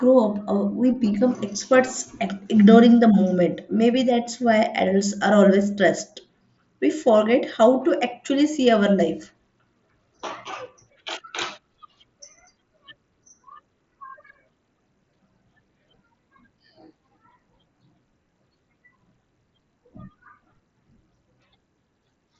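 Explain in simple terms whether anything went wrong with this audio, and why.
Nothing went wrong here: the speech comes through a Bluetooth mSBC headset link, and its lack of sound above about 7.7 kHz is simply how that codec works, not a fault.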